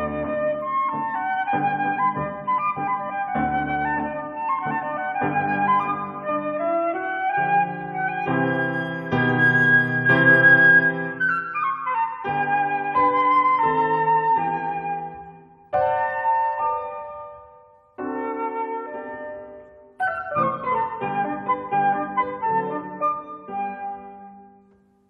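No technical faults can be heard anywhere in the audio; the signal holds steady and continuous throughout.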